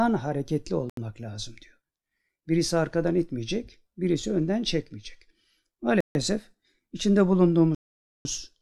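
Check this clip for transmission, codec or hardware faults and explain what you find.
Three dropouts in this speech clip, all one kind: a Bluetooth stall, most likely, as the headphones' buffer drained while interference held packets up. The sound cuts to silence, then resumes: 0.90–0.97 s (77 ms), 6.01–6.15 s (146 ms), and a long 7.75–8.25 s gap (half a second).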